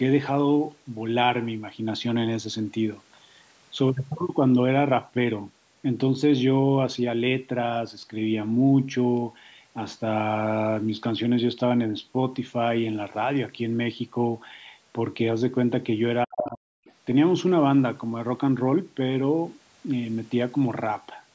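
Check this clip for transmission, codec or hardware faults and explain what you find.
Two faults from a call's echo control appear close together near the end, between 16.25 and 16.93 s. The band stops at 8 kHz, consistent with call microphone processing.

Speech suppressed in double talk, 16.25 to 16.84 s: the speech drops sharply, by roughly 40 dB at its deepest, for about half a second in total. This is likely the echo canceller clamping down while both ends talked at once, unable to tell the local talker from loudspeaker echo. A dropout from packet loss would cut cleanly and return at the same level.

Other side's voice leaking through, 16.86 to 16.93 s: right after the suppression lifts, a brief, faint scrap of a second voice appears, far below the main speech. It likely comes from the far end playing on the loudspeaker and reaching the microphone without being fully cancelled. It is a different voice at a low level, not a delayed copy of the local speech, which sets it apart from ordinary room reverberation or a codec pre-echo.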